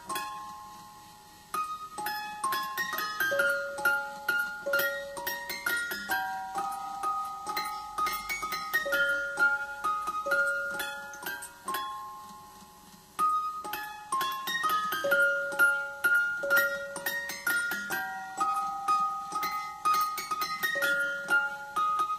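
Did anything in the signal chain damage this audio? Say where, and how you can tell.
No, nothing in the signal chain audibly damages this recording of sounds; the signal arrives intact at every stage from capture to playback.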